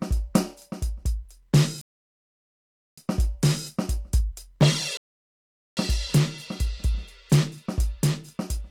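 Music with two rebuffering stalls, at 1.81–2.98 s and 4.97–5.77 s. Playback ran dry, went silent, then resumed exactly where it stopped, adding 1.16 s and 0.80 s. Each gap appears as a flat waveform line and a blank spectrogram column.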